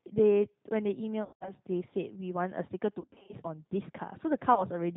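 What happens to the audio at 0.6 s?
The G.729 codec, running throughout, shapes 0.6 s: the speech sounds rough and synthetic, consistent with 8 kbit/s coding, and a spectrogram shows nothing above 4 kHz.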